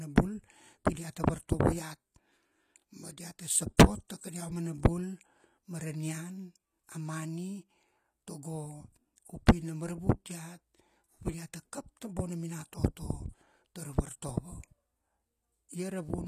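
Throughout the speech the treble sounds bright but synthetic: s sounds come out gritty and lispy, with a metallic sheen, and nothing is heard above 20.8 kHz. This is likely HE-AAC compression, rebuilding the top band by copying lower bands upward, at a low bitrate near 24 kbps. Unlike plain lowpass filtering, the highs are present but wrong.

At 3.77 s a burst of hiss, about 16 ms long, comes just before a sharp attack, which sounds softened. This is pre-echo: the transform block spreads noise meant for the loud onset into the quiet instant before it. Unlike a click, it leads the attack.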